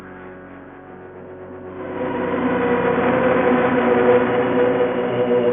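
No technical faults can be heard anywhere in this recording of sounds. There is nothing to mark at any point in the audio.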